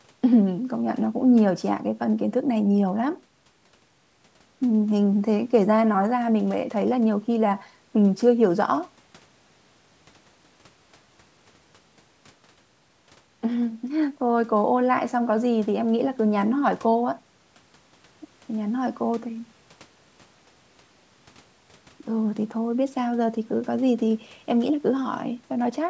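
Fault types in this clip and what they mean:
Nothing to flag here: the speech has simply gone through a call's microphone processing, which leaves nothing above 8 kHz, and that is just how such a path normally sounds.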